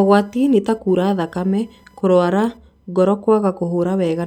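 A speech recording with computer activity noise running throughout: processor or graphics load shifts the audio circuit's shared ground, injecting a faint buzzing whine pulsing around a thousand times a second, roughly 40 dB below the speech, following the machine's activity rather than the voice.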